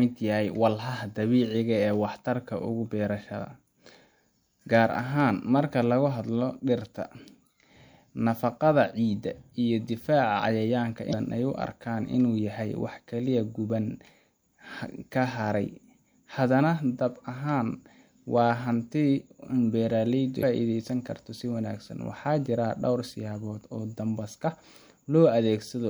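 Speech, with two brief bursts of damaged data in a compressed stream, at 11.09–11.14 s (just before "ay u") and 20.39–20.43 s, each about 40 ms long. Corrupted bytes leave the decoder unable to read those frames, so it loses sync and hunts for the next valid frame header, producing a short chirp, squawk, click or hole. On a spectrogram each burst shows as a brief break in the speech harmonics; the waveform shows an abrupt, jagged discontinuity.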